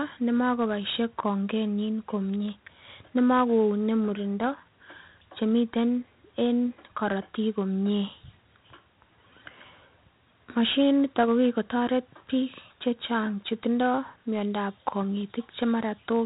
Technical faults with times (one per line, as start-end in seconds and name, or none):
0.00-16.25 4-bit ADPCM compression